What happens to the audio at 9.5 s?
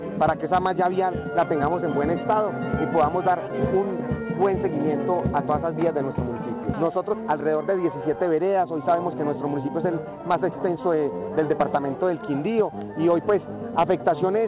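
At 9.5 s the audio is in a jitter buffer speed-up running from 9.11 to 11.70 s. The receiver drains excess buffered delay by cutting out short pitch-period slices, about a fifth of a second in total, so the sound plays 8% faster and feels hurried. Unlike a sample-rate speed change, the pitch stays put.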